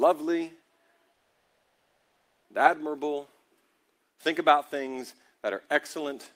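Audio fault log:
1.13–2.46 s, call audio freeze: the sound stalls, trails off, then sits silent for about 0.74 s. It resumes where it stopped. This is likely packet delay draining the jitter buffer.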